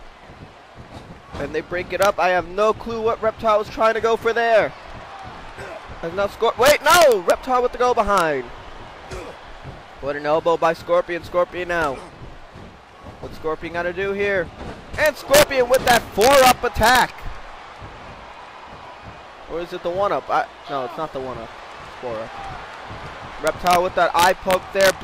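Integer overflow cracks the audio at 2.02–2.05, 6.66–7.31, 8.18–8.20, 15.06–17.02, 23.47–23.76 and 24.19–24.90 s: peaks barely over full scale, by about 1 dB at most, wrap to the opposite extreme instead of limiting, giving violent snaps far harsher than clipping's flattened distortion.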